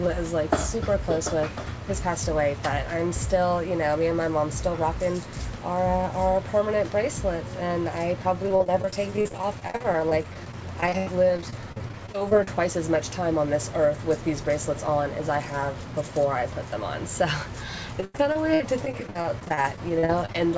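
From 8.49 to 12.48 s, and again from 18.01 to 20.35 s, repeated packet loss (robotic sound) chops the audio: dozens of short dropouts, the longest about 85 and 90 ms, are patched by stretching the preceding sound, so about a fifth of each span is filler. It sounds choppy, with pieces missing. On a spectrogram, the bands smear into flat, repeated slices, and the waveform shows abrupt joins. The whole clip also stops sharply at 8 kHz, which fits a wideband call codec.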